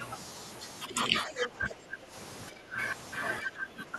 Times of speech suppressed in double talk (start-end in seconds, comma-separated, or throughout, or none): 0.85-2.13, 2.50-2.79, 3.42-3.98